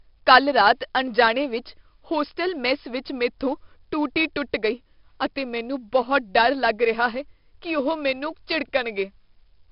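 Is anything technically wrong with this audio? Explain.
Yes. Throughout, the speech passes through 4-bit ADPCM compression at what sounds like about 44 kbps. Each sample is coded as a coarse step from a prediction, leaving gritty hiss riding every loud syllable, smeared attacks, and nothing above 5.3 kHz.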